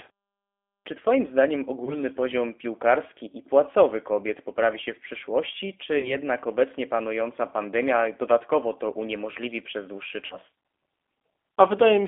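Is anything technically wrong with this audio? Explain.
Yes, there are two problems. The whole clip is speech squeezed through the G.729 codec, and there are three short dropouts patched over by the decoder.

The G.729 codec damage runs throughout and is plainly audible. The band sits at roughly 250 Hz to 3.5 kHz, which points to G.729A at 8 kbit/s. The codec rebuilds the voice from a vocal tract filter, a pitch predictor and a few pulses per frame rather than sending the waveform. That leaves speech intelligible but rough and a bit synthetic, with no lows or highs.

The VoIP packet loss concealed by the speech codec shows up at 1.85–1.96 s, 5.99–6.17 s and 10.26–10.37 s. The first gap is 20 ms of missing audio, which fits one lost packet. The later two are 40 ms each, which fits two packets apiece. The decoder fills each hole by stretching its last pitch and filter while fading the gain, so you hear a brief buzzy or smeared tone. 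The voice stays weak or distorted a little past the gap before it recovers.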